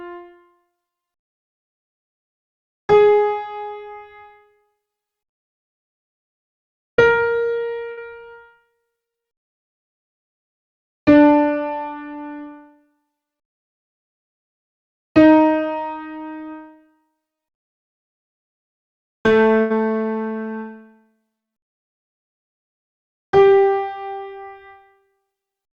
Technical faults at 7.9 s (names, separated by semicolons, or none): burst of packet loss